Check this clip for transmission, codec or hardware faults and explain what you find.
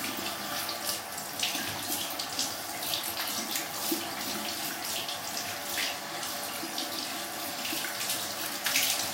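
One fault runs through almost the whole clip: clock slip clicks from 0.11 s to 9.12 s. A single sample drops or repeats roughly every 0.04 s, around two hundred times, most likely because two devices run on unsynchronised clocks about 500 ppm apart. The result is a soft, steady rattle riding on the sound. On a spectrogram it shows as evenly spaced thin vertical lines. In the waveform each slip is a tiny one-sample step.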